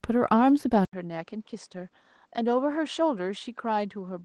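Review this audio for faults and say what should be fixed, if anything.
Opus voice compression runs through the whole speech clip, and the damage is plainly audible. The coder pairs linear-prediction coding of the lower band with a transform layer above 8 kHz. Too few bits are spread across the full band. The excitation is coded coarsely. The voice sounds hoarse, muffled and slightly robotic. The artefacts fit a rate near 16 kbps in 20 ms frames. To prevent it, raise the Opus bitrate for speech.

At 0.85 s the sound drops out for 80 ms. It then returns about 10 dB quieter and duller. From there to the end, nothing reaches above 8.9 kHz. A new background noise sits roughly 45 dB below the speech. This points to an input switched to a poorer device, likely another microphone or a headset's call profile. To prevent it, lock the recording input so the system cannot change devices mid-take.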